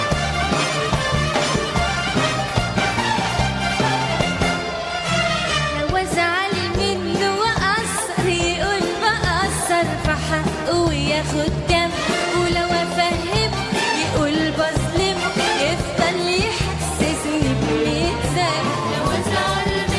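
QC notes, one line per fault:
No fault found.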